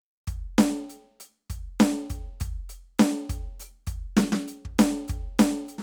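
Music clip, and no technical fault can be heard anywhere in it.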